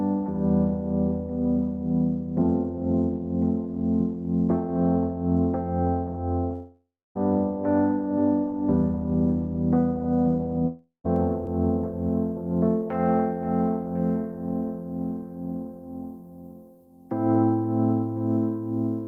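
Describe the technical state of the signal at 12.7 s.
At 12.7 s, pre-emphasis is left on: the treble boost added for transmission was never undone by the matching de-emphasis, a shape that fits the FM 75 µs curve. From 11.16 s to the end at 19.07 s, highs sit about 14 dB hot at 10 kHz, so the sound is thin, bright and sibilant.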